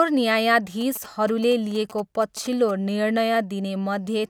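Galloping ticks and brief 217 Hz buzzes, well under the speech, run from 0.81 to 2.71 s: GSM signalling bursts from a nearby phone, rectified in the audio circuit.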